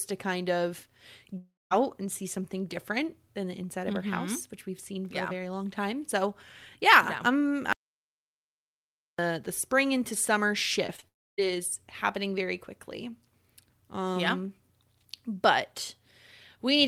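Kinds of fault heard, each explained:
Long network dropout: At 1.37 s, just after "to kind of", the sound is carried on as a fading buzz or hiss, then goes silent for about 0.2 s. It returns at 1.73 s with "and see something different". A second gap follows at 11.08 to 11.40 s. The likely cause is lost network audio.
Audio dropout to silence: After "yeah I'm" at 7.73 s the sound cuts to silence. No room tone remains. It comes back at 9.19 s on "the spring into summer", about 1.5 s later. The likely cause is the input being lost while silence kept being written.
Short concealed packet loss: Three brief holes of about 20 ms each occur, at 10.87, 10.96 and 11.0 s, the last right after "the spring into summer". Each is patched by extending the preceding sound. They come across as quick smears or wobbles.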